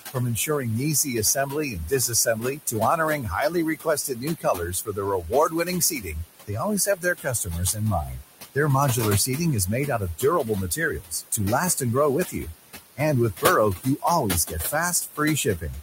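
Noise suppressor artifacts run through the whole of this speech clip. The suppressor pulls down the bands it judges to be steady background by about 20 dB, frame by frame. The room noise, sitting only about 10 dB under the speech, therefore drops away in the gaps and swells back under each phrase. Speech cut by the noise suppressor occurs at 0.11–6.16 s, where roughly half of that stretch is affected, and again at 6.47–8.15 s. It also occurs at 9.87–11.39 s just after "is made", at 12.24–12.54 s just after "and grow", at 13.77–14.05 s, and at 14.46–15.74 s. In these spans the suppressor mistook quieter speech for noise and turned it down with the background by about 14 to 18 dB, so soft consonants and word endings sound swallowed or faint.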